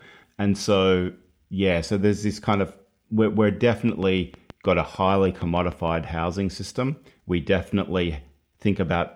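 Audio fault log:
3.89–5.89 s: train of clicks, about fifteen similar pulses at a steady 6.5 per second, peaking around 5 dB above the speech, unlike random crackle; likely interference.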